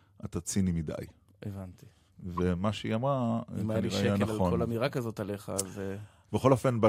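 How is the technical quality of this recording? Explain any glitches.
Two brief glitches affect the speech, both of the same kind. A corrupt frame was decoded at 1.03–1.11 s and again at 2.37–2.40 s. Flipped bits in the compressed data were decoded anyway, putting energy at the wrong frequencies. The result is a faint chirp or blip, then a louder one spread across several frames.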